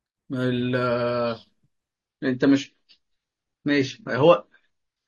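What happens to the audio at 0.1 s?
Nothing goes wrong at 0.1 s; the speech plays through that moment intact, with no dropout, click or distortion.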